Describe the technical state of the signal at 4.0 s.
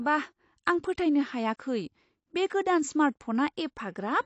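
At 4.0 s the speech carries AAC compression damage, present across the whole clip rather than at that moment alone. Nothing sounds above about 8.6 kHz, so the top end is dull. The damage is plainly audible. Sibilants turn fizzy and smeared, with a warble. The likely cause is AAC-LC coding at a low rate, which fits about 32 kbps. With so few bits, the encoder drops the highest band and quantises what remains coarsely.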